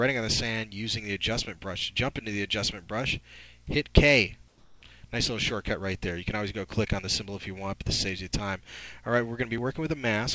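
From 4.48 to 4.82 s, about 340 ms, the real background drops out for a smooth, flat hiss about 4 dB quieter. That's comfort noise in place of the background, likely the sender's discontinuous transmission pausing while the receiver fills the gap with synthetic noise. The top end stops near 8 kHz throughout, fitting a G.722 call path.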